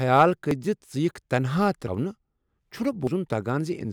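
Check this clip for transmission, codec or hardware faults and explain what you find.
Three abrupt jumps break up the speech, at 0.51 s, 1.88 s and 3.07 s. Each is a spot where the sound leaps forward, with about a tenth of a second missing and no gap of silence. The likely cause is a dropped buffer (overrun): the recording software fell behind, the hardware overwrote a chunk of samples before they were read, and the audio on either side was spliced straight together.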